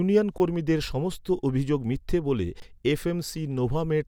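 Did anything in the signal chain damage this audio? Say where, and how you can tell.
Yes. There is an underrun with held sample at the driver or buffer stage, at 0.38–0.40 s and again at 2.60–2.62 s. In each 20 ms gap the output buffer ran dry and the converter held its last sample, so the waveform flattens and the speech stops almost without a click. About 20 ms of live audio was skipped each time. A dropout to silence would instead fall to zero and click on entry too.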